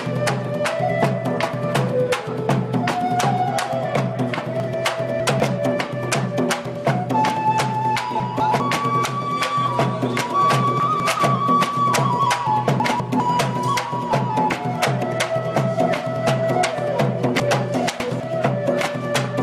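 Chunks out of order at 4.6–5.4, 8.2–8.6, 10.8–11.2, 12.8–13.2 and 17.4–18.2 s: a 200 ms chunk plays one or three chunks late, producing jumbled moments. Spectrograms show sharp vertical seams at each join.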